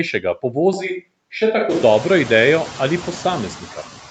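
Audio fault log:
Throughout, noise suppressor artifacts: a suppressor is pulling down whatever bands it judges to be steady noise, frame by frame, by about 12 dB. The background therefore dips in the gaps between phrases and swells back up under the speech. That comes from the frame-by-frame gain changes, which ease off in the bands where speech is present.
0.73 to 1.82 s, switch to a distant microphone: the close microphone's feed drops out, likely because it failed or was deselected, and a farther pickup carries the voice instead. The speech turns roomy and hollow at once and loses some low end. The level stays roughly the same, while the room noise sits far down, around 35 dB under the speech. The change in and the change back are both abrupt. Around 1.5 s the room noise climbs sharply, still well below the voice, as heard through the call's 8 kHz band limit.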